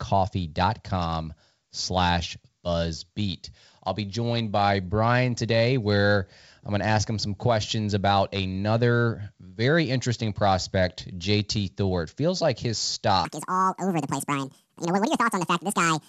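From 13.25 s to the end at 16.09 s, the speech runs as a section at the wrong speed: 1.75 times too fast, with pitch raised roughly ten semitones, sounding high and hurried. The likely cause is playback or editing against a mismatched clock.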